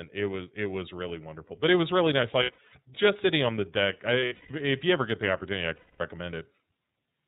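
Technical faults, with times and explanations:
throughout: iLBC codec. The speech is band-limited with nothing above 4 kHz and has a plainly rough, slightly synthetic edge. It is coded in stand-alone 30 ms frames at 13.33 kbps, so each frame's excitation is modelled on its own, leaving that grainy texture.
2.43 to 2.74 s: lost iLBC frames. Right after "it was really nice" the sound turns into brief buzzy, held fragments before "just sitting on the". About 180 ms of frames went missing in short runs, the longest around 70 ms, each patched by repeating the last pitch cycle with noise.
4.19 to 4.51 s: lost iLBC frames. After "on the deck I" comes a longer droning, breathy smear before "if you ever get". About 240 ms was lost, with one run near 150 ms, long enough for the repeated pitch cycle to fade. Clarity returns almost immediately because each frame decodes independently.
5.75 to 6.01 s: lost iLBC frames. 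Following "get the opportunity I" the sound stalls into a held, slightly buzzy tone that dies away. About 240 ms of frames were missing and concealed by looping the final pitch period mixed with noise, decaying across the gap.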